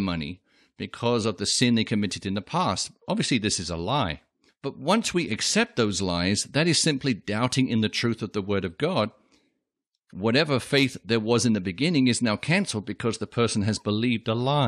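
Speech, with nothing technically wrong with it.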